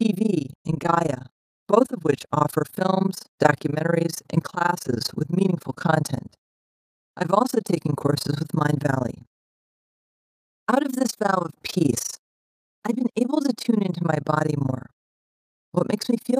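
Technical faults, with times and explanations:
Throughout, overlap-add ripple: the speech carries a fast, rough flutter, a robotic tremolo at around 30 times per second. The audio was split into windowed frames and rebuilt with an overlap whose windows do not add up to a steady gain, so the level swells and dips once per frame. Here the dips are very deep, about 60 dB, so the sound is nearly chopped on and off at the frame rate rather than gently modulated.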